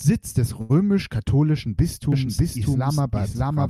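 At 0.61 s there is a short stall from a late packet, lasting until 0.71 s. A packet arrived late and the jitter buffer ran dry. The last sound is held for about 81 ms, with a faint buzz or dip. Nothing is lost, and playback resumes from the same point.

From 2.12 s to the end there is a doubled audio track. A second, full-band copy of the speech starts abruptly, about as loud as the original. It trails by roughly 0.7 s, with no decay or room colour. A second capture path is the likely cause.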